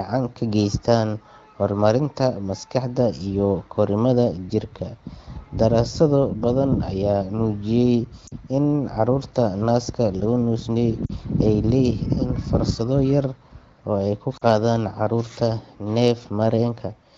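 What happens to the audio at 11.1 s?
From 11.06 to 11.12 s, just before "ay leeyihiin fursado yar", lost AMR speech frames leave a brief drop to near silence as the decoder repeats prior parameters with falling gain, consistent with two 20 ms frames.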